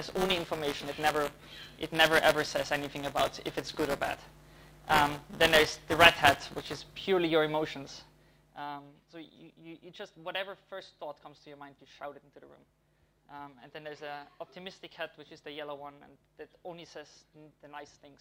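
From 0 to 6.79 s the audio carries buffer tearing: the writing side and the playback hardware have drifted out of step, so in every period a small slice of the buffer, a few percent, still holds audio from roughly 15 ms earlier, spliced in with abrupt joins. The result is a steady robotic buzz at 200 Hz, which points to a period of about 5 ms. The buzz rides on the signal and does not stand alone.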